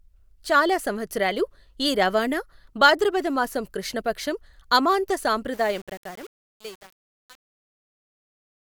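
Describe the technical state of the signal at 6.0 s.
At 6.0 s the signal is inside a span of truncation distortion on a fade, from 5.54 s to 8.72 s, just after "మాసం కృష్ణ పక్షం అమాంత". The speech fades out from about 5.5 s to the end. The fade stage drops resolution without dither, which fits about 7 bits. As the level falls, the waveform collapses into coarse square steps. The quiet tail sounds gritty.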